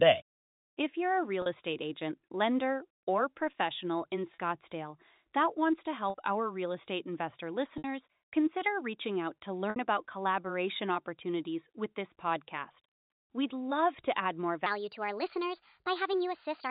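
Right at 1.42 s, between "you're a" and "estate agent lender or", there's a quick dropout covered by packet loss with pitch repetition: the receiver lost about 40 ms of audio and filled it by looping the last pitch cycle, so you get a brief buzzy hold. The same thing happens at 4.34 s and 6.1 s (40 ms each), then at 7.78 s and 9.7 s, where the gaps run to 60 ms. The 9.7 s one falls between "consider reaching out to" and "about collaboration opportunities with". Those lengths fit two or three missing 20 ms packets, and in the longer ones the repeated cycle fades toward silence before the speech returns with a short cross-fade. All of this rides on the narrow G.711 telephone band, which stops everything above 4 kHz.

From 14.66 s to the end, just after "love to add more", there's a section at the wrong speed. It plays back about 1.26 times too fast, so the voice jumps up roughly four semitones and sounds hurried and chipmunky, with speed and pitch shifting together. 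That's likely an edit or playback step running this piece against the wrong clock.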